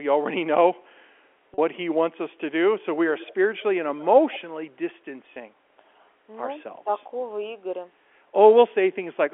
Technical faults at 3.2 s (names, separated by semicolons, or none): echo leak